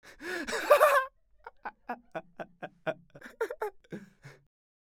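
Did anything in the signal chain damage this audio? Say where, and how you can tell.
No, nothing in the signal chain damaged this audio, and there is no point in it where harm can be heard.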